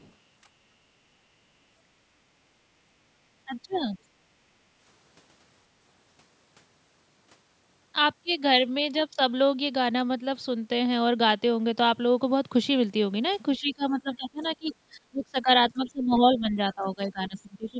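Other side's voice leaking through at 0.0 to 0.12 s: a faint second voice sits far beneath the speech. This is likely the far end's audio, played over a loudspeaker, reaching the microphone and not fully removed by the echo canceller.

Speech suppressed in double talk from 3.46 to 3.98 s: the talker's level sinks by up to about 20 dB in patches. The echo canceller, likely unable to separate the talker from the echo while both sides spoke, turned everything down. A brief scrap of leaked far-end voice shows at 3.73 to 3.77 s.

Speech suppressed in double talk returns from 13.59 to 15.49 s, dipping and thinning for well over a second. Leakage surfaces again at 14.45 to 14.51 s.

Other side's voice leaking through at 15.7 to 15.89 s: another faint snatch, somewhat less buried than the first.

Speech suppressed in double talk from 15.73 to 16.58 s and from 16.75 s to the end: the voice ducks in and out again, losing strength in broken stretches.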